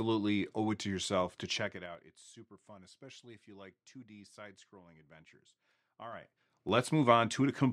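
A ticking, zipping texture rides on the speech from 1.49 to 2.04 s as the level drops, and from 6.04 to 6.78 s as it rises. This is zipper noise: the gain moves in unsmoothed 3 dB steps, around ten a second.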